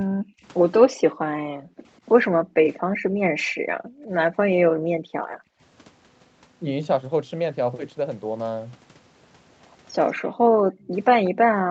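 Speech suppressed in double talk comes first, likely because the echo canceller mistook overlapping far-end and near-end speech for echo and turned both down. The voice drops by roughly 30 to 40 dB in brief bites between 0.03 and 0.44 s and between 1.11 and 1.53 s, then in short clips at 3.51 to 3.56 s and 5.43 to 5.48 s.

Background gated by the echo canceller follows. While the loudspeaker played, the canceller clamped the microphone by about 40 dB, so the room tone sinks away between 1.81 and 3.23 s and between 3.84 and 5.15 s, then again from 10.23 s to the end.

An echo leak sits inside that last stretch, from 10.83 to 11.3 s. Residual loudspeaker pickup likely slipped past the canceller and was sent back, leaving a faint copy of the voice about 191 ms late and roughly 25 dB below the speech.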